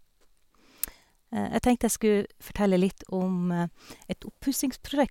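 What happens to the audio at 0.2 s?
Nothing goes wrong at 0.2 s; the speech there plays through intact, with no dropout, click or distortion.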